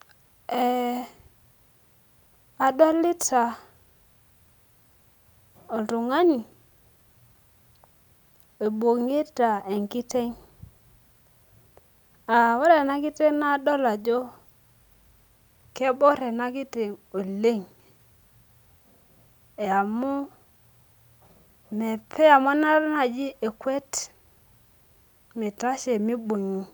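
No technical faults can be heard anywhere in the recording, with nothing to flag at any point along its run.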